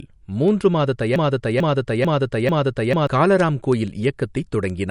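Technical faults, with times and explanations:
Throughout: low-bitrate audio saved at a high bitrate. Nothing is present above 11.2 kHz. The swirly, smeared detail of a heavily squeezed MP3 is audible across the speech. This is likely a low-bitrate MP3 that was later re-saved at a high bitrate. The second encoding made the file larger but could not bring back what the first one discarded. So both the cut-off and the first codec's artefacts remain.
0.16 to 4.70 s: word clock ticks. About fifteen sharp ticks arrive at a steady pace, roughly every third of a second. They are not all equally strong. The receiving device is running on its own clock, which drifts from the sender's by roughly 70 parts per million. Each time the two clocks slip past each other, a few samples are misread and one is dropped or repeated. The steady spacing reflects the constant drift between the clocks, with one sample slipping per tick.
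1.16 to 3.07 s: broken-record loop. A fragment 0.44 s long plays four times in a row, exactly the same each time and back to back. The speech that belonged in that stretch never arrives. The likely cause is a stall in the player, encoder or stream, which kept resending the last piece it held. That is why the repeats match perfectly instead of drifting.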